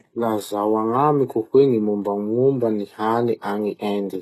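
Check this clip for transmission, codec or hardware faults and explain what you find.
One codec fault runs through the whole speech recording: the damage fits HE-AAC compression, likely at a low rate near 16 kbps. Nothing is present above 12.3 kHz. Below the crossover the codec spends its few bits on the core band. The treble is not coded directly but regenerated by copying lower bands upward under a coarse envelope. The top sounds bright but synthetic, with harmonics that don't line up across the crossover, so s sounds turn gritty, metallic or lispy.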